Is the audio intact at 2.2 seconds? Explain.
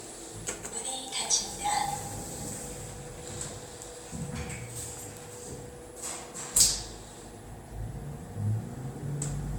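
No. At 2.2 s, as throughout, the sound is swirly, hollow and smeared with blurred attacks, likely generation loss from about seven MP3 re-encodes, each on a shifted frame grid.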